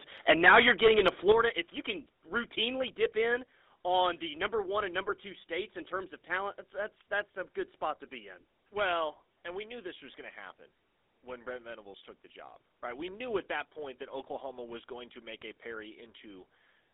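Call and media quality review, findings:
GSM full-rate codec, whole clip: buzzy, gravelly roughness on the speech, band squeezed to roughly 250 Hz to 3.7 kHz. Sounds like a 13 kbps GSM full-rate leg. Pulse-driven vocal-tract model with coarse excitation, so the grit is baked in.

Microphone overload, 0.29 to 1.32 s: harsh, crackly edges on the loud peaks, roughly a tenth of samples flattened, about 10 dB over. Likely the mic input gain set too hot, so peaks slam the converter ceiling and get their tops chopped.

Microphone volume stepped down, 0.31 s and 3.36 s: sudden level drops of about 4 dB, then about 2 dB, voice and background together. Second one lands between "you can routinely dip" and "on the number one". Likely the call app's gain control reacting to loud or clipping input, cutting device input in single steps.

Microphone volume stepped up, 12.6 s: abrupt jump of about 4 dB right after "took the job", background rising with the voice. 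The call software decided the mic was too quiet and raised device input gain in one step.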